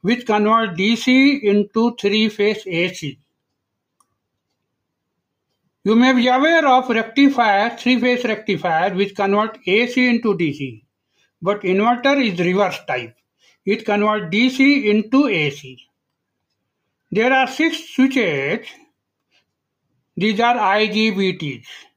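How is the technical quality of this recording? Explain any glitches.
No technical faults can be heard in the recording; the signal stays continuous and stable throughout, with nothing that calls for explanation.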